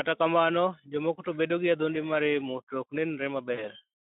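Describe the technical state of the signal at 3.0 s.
Faint, evenly spaced ticks run through the speech around this point, part of clock slip clicks heard from 0.59 to 3.37 s, roughly one every second and a half. The likely cause is two unsynchronised clocks differing by around 15 ppm, forcing a single sample to be dropped or repeated each time the drift accumulates.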